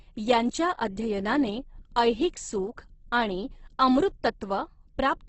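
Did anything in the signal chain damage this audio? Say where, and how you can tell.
Yes. Opus compression damage runs through the whole speech clip, at the codec stage. The speech sounds rough, grainy and noisy rather than swirly, and nothing remains above 8.1 kHz. The likely cause is a heavily squeezed Opus encode whose sound fits roughly 12 kbps in its music (CELT) mode. Bands starved of bits are refilled with folded lower-band content or noise, which turns harmonics grainy, and the bandwidth has been narrowed to wideband.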